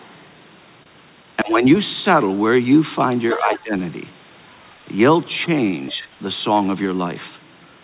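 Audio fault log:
0.83 to 0.89 s, short stall from a late packet: the jitter buffer ran dry, so the receiver held the last sound for 28 ms until the packet arrived and then resumed where it left off. Nothing is lost, but the sound drags briefly and later audio sits 28 ms later.
1.42 to 1.63 s, 3.34 to 3.74 s and 5.94 to 6.07 s, speech suppressed in double talk: the speech sinks by around 15 dB in the first two spans and by about 5 dB in the third, then recovers. The likely cause is an echo canceller that could not separate the talker from the loudspeaker echo and turned both down.
3.30 to 3.58 s and 5.89 to 5.96 s, other side's voice leaking through: a second, fainter voice is heard under the talker, at about 15 dB below the speech in the first span and about 30 dB below in the brief second one. This is likely residual loudspeaker echo that the canceller left in the microphone signal, and it overlaps the suppression dips.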